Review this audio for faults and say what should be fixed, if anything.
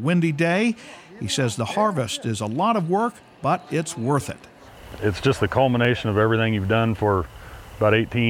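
Five sharp, isolated clicks occur at 0.88, 4.18, 5.85, 6.65 and 7.56 s. Each is a single thin spike with no gap in the sound around it. This is the signature of dropped samples. The likely cause is a fraction of a millisecond of audio, about 0.4 ms, going missing from the stream. The waveform then jumps straight to a later value. That step is heard as a click. To prevent it, give the capture or playback buffer more headroom so it never underruns.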